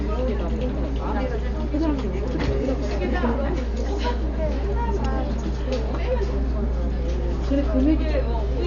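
It's a recording of sounds, and the whole thing comes out dull, with nothing above 6.9 kHz and a rough, fluttery noise clinging to tonal parts. That's likely heavy Dolby Digital compression: the band is narrowed and starved frequency lines are filled with dither noise, which fits a bitrate around 48 kbps.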